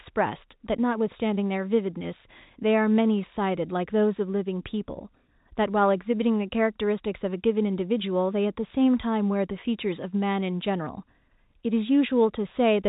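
No faults turn up anywhere in this speech recording; what you hear is just the usual narrow band of G.711 telephone coding, with nothing getting through above 4 kHz.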